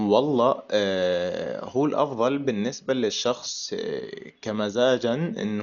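From start to finish the speech is band-limited, with nothing above 7 kHz, so it sounds dull. It also carries heavy coding damage: a rough, fluttering noise hangs around voiced tones, and quiet detail has been replaced by grainy hiss. This pattern is likely Dolby Digital compression at a starved bitrate, consistent with roughly 48 kbps. To save bits, the encoder narrowed the band and left many frequency lines without mantissa data, so the decoder filled those gaps with dither noise.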